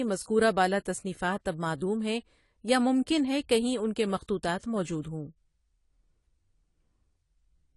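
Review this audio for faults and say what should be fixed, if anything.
The speech is band-limited throughout, with nothing above 11.5 kHz, and plainly audible codec damage: dull, smeared consonants and a fizzy, warbling texture on sibilants. This is likely AAC compression, AAC-LC at a rate that fits around 32 kbps, which discards high frequencies and quantises the rest coarsely. To prevent it, encode at 96 kbps or higher, or keep a lossless master.

Pre-echo appears from 4.58 to 4.63 s, just after "ہے کہیں ان کے". A short hiss spreads about 48 ms ahead of a sharp attack, softening its onset, because the codec's quantisation noise is spread across the whole transform block, including the quiet part before the transient. To prevent it, raise the bitrate or use an encoder with effective block switching for transients.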